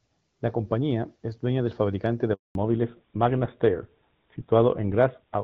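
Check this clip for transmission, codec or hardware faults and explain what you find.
Two faults occur together in this speech clip, one after the other.

Handover gap, 2.33 to 2.55 s, right after "dueña del fabricante de": no speech frames arrived while the network switched, so the audio fades quickly into 220 ms of silence.

Fallback to narrowband, from 2.55 s to the end: the call dropped out of HD Voice, where the sound points to AMR-WB at 12.65 kbit/s, into a narrowband codec consistent with GSM full rate. Nothing survives above 4 kHz, so the speech sounds duller and rougher.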